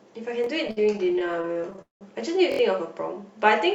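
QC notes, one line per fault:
0.44–0.46 s, repeated buffer: a tiny chunk of about 23 ms, which fits a 1024-sample buffer, plays twice in a row with a hard seam at the join. New audio didn't reach the device in time, so it replayed what it already had. Because the chunk is so short, you hear a quick click-like stutter rather than an obvious echo, and about 20 ms of real audio gets skipped.
0.67–2.03 s, repeated stalls (stutter): packets kept showing up late, so the jitter buffer drained 19 times over this stretch. Each time, the receiver held the last sound going until fresh data arrived, which covers about 477 ms in total, roughly a third of the span. The longest hold, 193 ms, stretches out and fades. Nothing is actually dropped, but the sound drags and hiccups along instead of flowing.
2.52–2.59 s, repeated buffer: a roughly 23 ms slice, again consistent with a 1024-sample buffer, fires four times back to back, three extra plays, each with a hard edge. 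That run of identical tiny repeats comes across as a short buzzy rattle. The device was starved again and kept looping its last buffer, so about 70 ms of the real audio never gets heard.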